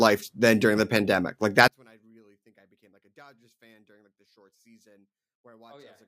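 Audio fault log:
1.68–6.08 s, one channel inverted: from 1.68 s the speech falls by about 35 dB in mono, leaving a faint residue rather than the clean silence of a dropout. The likely cause is one channel with reversed polarity, cancelling the shared centred content.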